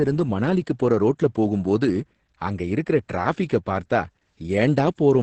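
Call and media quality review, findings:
Opus voice compression, whole clip: speech muffled, hoarse, faintly robotic. Spectrogram shows hard ceiling near 8.4 kHz; coarse SILK excitation at roughly 10 kbps smears harmonics. Wideband mode, encoder bitrate too low.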